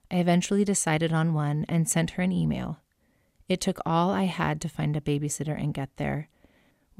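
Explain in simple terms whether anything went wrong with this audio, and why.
Nothing went wrong with this audio; there is no fault to point to anywhere in it.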